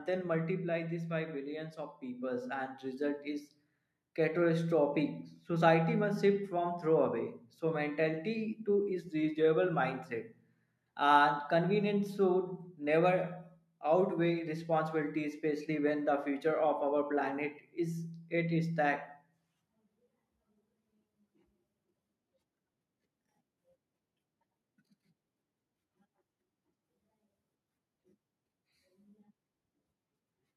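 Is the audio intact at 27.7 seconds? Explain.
Yes, at 27.7 seconds the audio is intact, with no audible fault at that moment.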